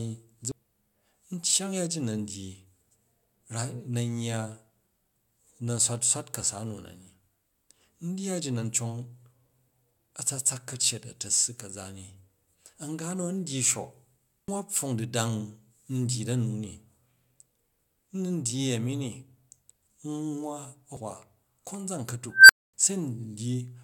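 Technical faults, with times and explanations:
0.52 s, 14.47 s and 20.97 s, CD skip. The laser jumped to another turn of the disc spiral. Each gives a tick and a very brief mute, a few milliseconds, up to about 10 ms at 14.47 s, between "nu a̱n dygi shok" and "pfong du̱dang". Then speech resumes from a different place.
22.30 to 22.74 s, unstable filter. A recursive filter with bad coefficients feeds back on itself. A tone of roughly 1.5 kHz swells over 192 ms into a loud squeal and clips. The arithmetic then overflows, and the output cuts to silence for 244 ms until the filter resets.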